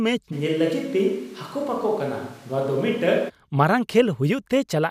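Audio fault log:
0.34–3.28 s, switch to a distant microphone: the speech abruptly turns roomy and hollow, thinner in the low end, and drops by roughly 5 dB, with room noise rising to about 30 dB below the speech, then snaps back to the close sound at 3.28 s. The likely cause is the close microphone's feed dropping out, leaving a farther pickup. On a waveform the envelope steps down at the start and back up at the end. A spectrogram shows weaker low bands, smeared reverberant tails and a raised noise floor between syllables.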